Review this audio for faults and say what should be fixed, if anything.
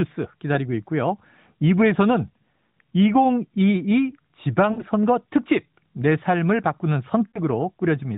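Lost AMR speech frames hit at 2.71 s, 4.72–4.83 s and 7.28–7.40 s. The decoder stretches the last good frame across 40–60 ms gaps, so the speech briefly smears and dips. Better radio coverage or stronger channel coding would keep those frames from failing their checks.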